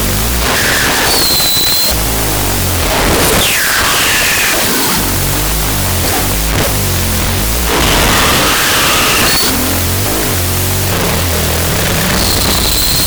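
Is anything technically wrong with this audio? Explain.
Yes. Throughout the clip, the speech sits under a loud, harsh hiss and plays at half speed, an octave low. This is a wrong sample width: 16-bit samples were read as unsigned 8-bit, splitting each into two bytes, so only the high bytes still track the real waveform.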